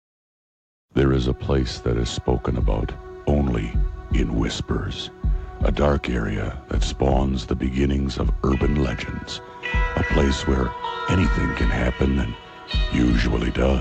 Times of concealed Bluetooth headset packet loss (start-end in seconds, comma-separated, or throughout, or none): none